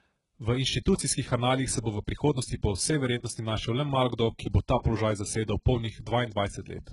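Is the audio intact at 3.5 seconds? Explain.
No. At 3.5 seconds the speech carries the same damage heard from start to finish. The treble is likely rebuilt by HE-AAC compression at a very low rate, fitting roughly 12 kbps. Only the lower band is truly coded. The upper band is copied up from below and shaped coarsely, so its harmonics don't line up. The s sounds come out gritty and metallic. Nothing is present above 11.1 kHz.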